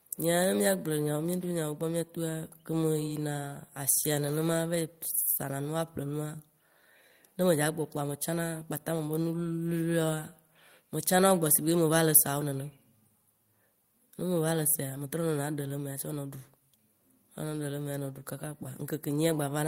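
Nothing in the recording stood out as a technical problem on listening.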